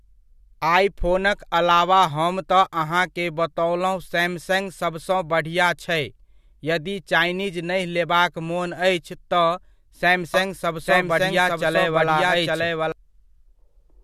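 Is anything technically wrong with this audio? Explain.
Yes. A doubled audio track runs from 10.34 to 12.92 s: a second copy of the speech, at roughly equal level and about a second behind, switches in and out abruptly, with no decay or room colour. This likely comes from a slower second capture path or an edit holding two offset copies.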